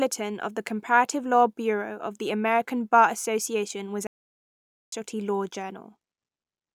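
At 4.07 s the speech cuts to silence for about 0.85 s, resuming at 4.92 s: a playback stall, likely the player starving for data or its thread blocking.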